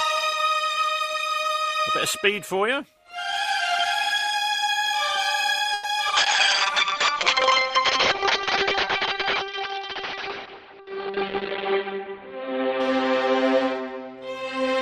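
At 5.73 to 5.86 s the sound stalls for about 110 ms: the last sound is stretched into a short fading buzz or hiss, then the audio resumes exactly where it stopped, with nothing lost. That points to a call audio freeze, likely from packets held up in transit until the jitter buffer ran dry. Unlike packet loss, it inserts a gap instead of removing material. Right after, at 6.08 to 6.11 s and again at 6.11 to 6.14 s, two short concealed packet losses each leave a brief smear or wobble. About 20 ms of real audio is gone in each, patched over by extrapolation, so short sounds can vanish rather than being delayed. From 6.17 to 13.62 s a call bitrate drop takes the encoder from 32 to 7 kbps. The band narrows from about 20 kHz to about 6 kHz, giving a muffled, rough, watery sound that sits at its worst for about 5.2 s. This is a steady change of timbre, not the brief disruption of a dropout. Inside that stretch, at 11.67 to 12.80 s, a jitter buffer speed-up plays the audio about 7% fast by trimming pitch-period pieces totalling roughly 70 ms. 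The pitch is unchanged, so it sounds hurried, not chipmunk-like as resampling would.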